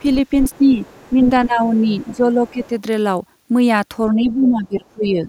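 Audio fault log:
0.42–1.46 s, 1.93–2.16 s and 2.47–2.68 s: other side's voice leaking through. A faint second voice sits under the speech, roughly 25 dB down in the first two stretches and nearer 30 dB down in the last. The likely cause is a loudspeaker echo that the echo canceller failed to fully subtract from the microphone. On a spectrogram, weak harmonic striations with their own pitch contour run beneath the main voice. The waveform shows little beyond a slightly thickened low-level floor.
0.59–2.72 s and 4.14 s to the end: speech suppressed in double talk. The talker's level sags and the top end dulls in patches totalling about a second in each span, by around 10 dB in the first and around 15 dB in the second. This is likely the echo canceller mistaking simultaneous talk for echo and attenuating everything. On a waveform, the envelope pumps down in uneven chunks. A spectrogram shows upper bands thinning or dropping out while low harmonics persist.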